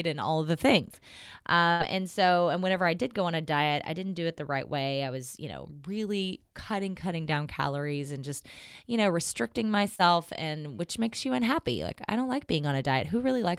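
At 1.71 s a burst of packet loss cuts in for about 0.1 s. The receiver stretches the last sound for roughly 82 ms, a fading buzz or hiss, while 80 ms of real audio is lost, and the stream resumes at "and so and whenever". At 9.96 s, after "just you know restricting", a short concealed packet loss leaves a 40 ms hole. The decoder fills about 35 ms of it by extrapolating the preceding sound, then blends back in before "and which makes you", so the join is heard as a brief smear or wobble.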